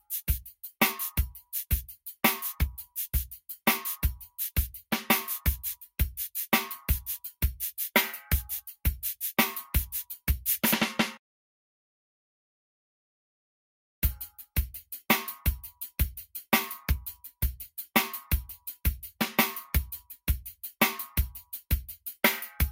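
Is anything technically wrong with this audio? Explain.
Yes. Throughout the clip, a noise suppressor is applied to sounds it was not built for. It treats steady tones and decaying tails as noise and pulls them down, so the level swings by around 5 dB. Held parts thin and pump.

There are also three spots where sound is cut by the noise suppressor: 0.45 to 0.74 s, 1.88 to 2.17 s, and 3.33 to 3.6 s. Each time, the suppressor misjudged the sound and clamped it. The drops reach about 11, 10 and 9 dB over roughly a fifth of a second, so the sound briefly sinks.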